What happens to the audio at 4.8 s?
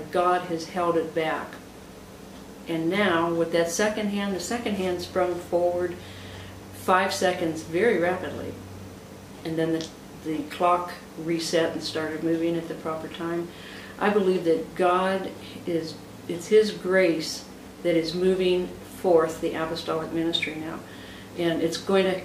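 Nothing goes wrong at 4.8 s; the audio plays through that moment intact, with no dropout, click or other fault.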